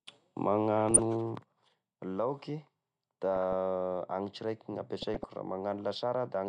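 From 0.80 to 0.99 s the speech is hit by DAB burbling: weak reception lets bit errors slip past the error correction into the MP2 stream, corrupting samples and scale factors so individual sub-bands leap in level for a frame at a time. On a spectrogram this appears as scattered rectangular blocks of energy confined to narrow bands, switching on and off at frame boundaries.

At 1.35 s the level of the speech drops abruptly by about 6 dB and stays down to the end of the clip. The likely cause is one channel dropping out: with one stereo side lost, the mono sum keeps only half of the content common to both channels, and anything present only in the missing side vanishes. The waveform shows a clean step down in envelope at 1.35 s, with no fade.

DAB burbling returns from 3.35 to 3.53 s and again from 5.01 to 5.32 s, the longer burst corrupting roughly twice as many frames, consistent with an error rate of a fraction of a percent. 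Both show up on a spectrogram as isolated band-limited blocks flickering frame by frame.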